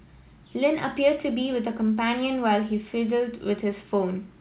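No technical faults are audible.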